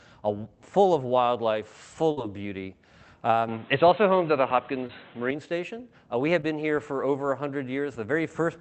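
At 2.11 to 2.19 s there is a burst of packet loss. Several consecutive packets arrived too late or not at all, and the receiver stretched the last sound it had across roughly 53 ms before fading it. It sounds like a brief held buzz or hiss, and then the audio jumps ahead with about 60 ms of material gone. On a spectrogram the harmonics or noise freeze into flat horizontal streaks that dim, then the pattern resumes abruptly. In the waveform the envelope droops, then steps back up.

From 3.48 to 5.31 s the sound turns dull and boxy with no gap at the changeover. The most likely cause is an input switched to a poorer device, with a narrower-band microphone or headset taking over. Nothing is left above 4.1 kHz, where outside this stretch the spectrum reaches to around 8 kHz through the call codec. A new noise floor sits well below the signal, and the level shifts by a few dB. On a spectrogram the energy is cut by a hard ceiling near 4.1 kHz that lifts again at 5.31 s. 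In the waveform the overall amplitude steps at both edges.

Short concealed packet loss occurs at 4.87 to 4.91 s, inside the dull stretch, and again at 6.41 to 6.45 s. Each time about 20 ms never reached the decoder in time. The receiver synthesised a continuation of the preceding sound and cross-faded back into the real audio. It sounds like a tiny smear or wobble. On a spectrogram there is a short, slightly blurred patch where fine detail smooths out, and in the waveform a brief, overly regular segment.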